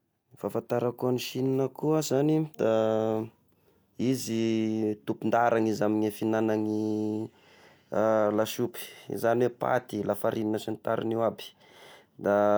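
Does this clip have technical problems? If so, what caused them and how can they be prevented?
No, there are no technical problems in this recording.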